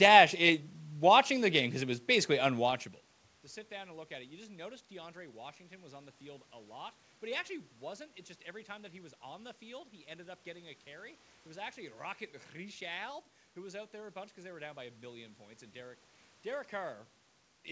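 No technical faults can be heard in this speech recording; the room's background sound and the talker's shifts in distance from the microphone around 2.5 s and 17 s are part of the recording.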